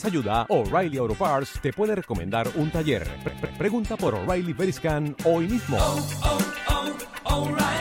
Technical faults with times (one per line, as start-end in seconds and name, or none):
3.28-3.63 repeated frames